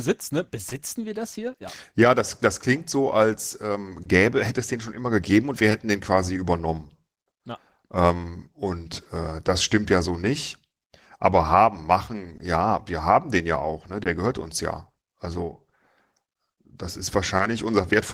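Clock drift between sender and receiver runs through the whole speech recording. The sender's clock runs roughly one percent slow, so the receiver's jitter buffer keeps draining and has to stretch or repeat short slices to stay fed. The result is small, irregular timing hiccups, a faint stutter or drag now and then. On a waveform these show as tiny duplicated cycles. A spectrogram shows brief vertical seams where harmonic lines jog or thicken slightly.

Scattered short gaps appear between 0.69 s and 17.41 s: around ten of them, spread one at a time across that span, none longer than about 20 ms. Each lost or late packet was patched by carrying the preceding sound forward, roughly a fifth of a second of concealed audio in all, about one percent of the stretch. They are heard as quick ticks or slight smears. A spectrogram shows narrow frozen columns where the texture repeats, and the waveform shows short copied segments with small joins at their edges.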